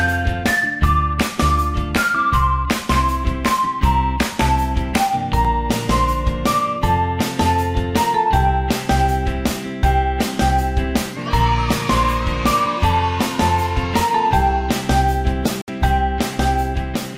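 Dropped samples at 5.45 s and again at 16.34 s: each is a single sharp click, a thin vertical line across the spectrum, where under a millisecond of audio is missing and the waveform jumps straight to a later value, likely a brief stall in the sample stream.

A Bluetooth dropout at 15.62 to 15.70 s leaves a 64 ms silent hole, likely packets arriving too late for the wireless link, so playback resumes further on as though the sound had continued underneath.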